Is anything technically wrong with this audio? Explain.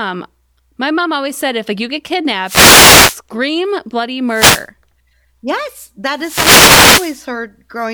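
Yes. Three wireless microphone noise hits are audible as bursts of static swishing over the speech: 2.43 to 3.20 s, just after "if like you get", 4.29 to 4.68 s, and 6.14 to 7.25 s. Each is a fade in the analogue FM radio link, where reflected signals cancel and the receiver's own noise rises over the speech.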